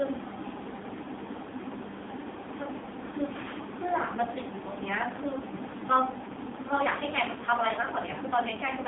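AMR narrowband mobile codec damage runs through the whole clip. The speech sits in a telephone band of about 200 Hz to 3.6 kHz with nothing above 3.7 kHz, and heavy coding leaves it buzzy and synthetic, which fits the low 5.9 kbps AMR-NB mode.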